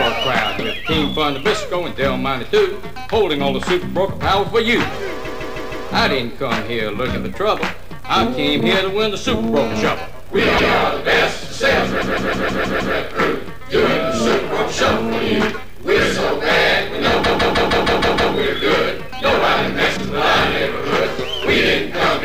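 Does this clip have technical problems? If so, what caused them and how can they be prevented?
Yes, the clip shows repeated frames. A block of about 157 ms, which fits a run of roughly six compressed frames, is written or sent again and played back extra times: four extra plays from 5.24 to 5.87 s, one from 10.57 to 10.73 s, six from 12.01 to 12.95 s, and seven from 17.23 to 18.33 s. Each repeat is heard as a stutter. The stutters add about 2.8 s to the clip. Preventing it means de-duplicating frames by sequence number or timestamp in the writer, network jitter buffer or decoder, so a resent block is discarded rather than played.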